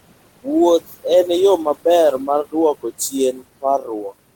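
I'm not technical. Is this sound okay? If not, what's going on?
No, not quite. Two things are going on.

First, there are noise suppressor artifacts all the way through. A noise-cleaning stage is pushing the room's background noise down hard. That noise drops away between words and creeps back under them.

Second, there's speech cut by the noise suppressor. That same cleaner sometimes mistakes bits of speech for noise and turns them down too. Listen just before "en yo maber" around 0.87 to 1.05 s, and just after it from 2.19 to 2.55 s. It happens again at 2.8 to 3.14 s, 3.32 to 3.43 s and 3.61 to 4.13 s. Soft sounds there come out swallowed or faint.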